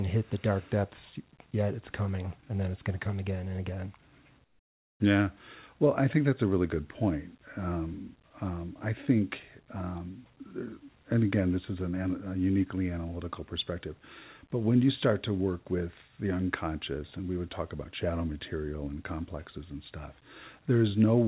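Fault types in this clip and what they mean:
Comfort noise in place of the background: at 4.44 to 5.0 s, a 560 ms pause loses its natural background detail and carries a flat, steady hiss about 15 dB quieter, likely because transmission halted during silence and the receiver filled the gap with synthetic noise.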